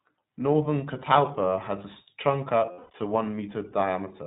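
The whole recording runs through the iLBC codec, and its damage is plainly audible. Nothing above 4 kHz survives, and the speech has a rough, slightly synthetic edge. That character fits 20 ms frames coded independently at roughly 15 kbps.

From 2.66 to 2.95 s, lost iLBC frames break the speech. About 220 ms of audio is missing across that 280 ms span, consistent with eleven dropped 20 ms frames. The longest run of losses is around 200 ms. The decoder fills each gap by repeating the last pitch cycle with added noise, so the gap sounds like a held, buzzy, fading vowel. The voice returns almost immediately.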